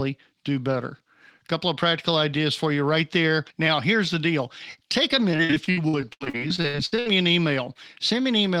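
Repeated packet loss (robotic sound) runs from 5.31 to 7.07 s. Dropouts up to 79 ms are patched by extending preceding speech, leaving choppy delivery with pieces missing.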